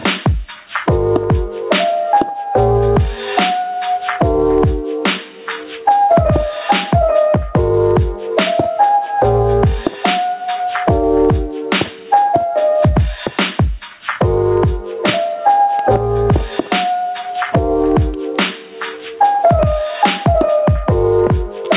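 Gain pumping runs through the whole clip: the gain swings by around 20 dB, ducking under every loud sound, squashing loud and soft parts together, likely from input gain set far too high with a fast limiter clamping down. The call path's band-limiting, with nothing above 4 kHz, fits a narrowband G.711 A-law codec at 64 kbps.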